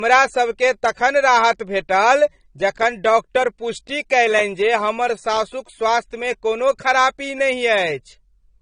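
Across the whole speech clip the sound is dull and band-limited, with nothing above about 9.7 kHz. It is likely low-bitrate audio saved at a high bitrate: a cut-off this low fits an earlier AAC encode around 32 kbit/s, and the later high-rate MP3 cannot restore the missing top end.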